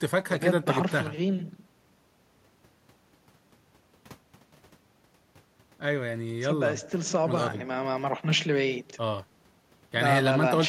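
Nothing stood out on listening to this speech recording.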